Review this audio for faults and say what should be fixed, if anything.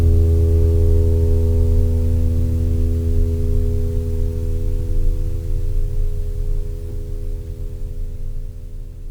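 Nothing stood out on listening to the music, so there is nothing here that needs fixing.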